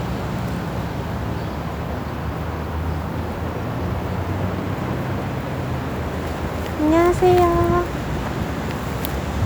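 Everyday sounds, with no technical faults to be heard.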